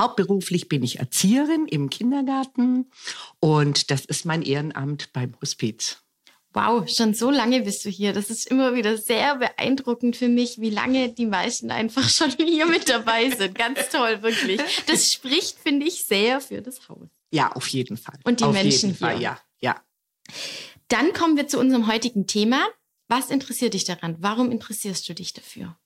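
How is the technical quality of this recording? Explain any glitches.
The quality takes three dips, all the same glitch: a Bluetooth SBC bit pool drop at 2.11–5.07 s, 10.16–13.36 s and 16.25–19.32 s. The congested link forced fewer bits, which fits bit pool 31 falling to 13 (roughly 94 kbps). That starved the top sub-bands and coarsened the rest, so the treble goes dull and a gritty noise rises until it recovers.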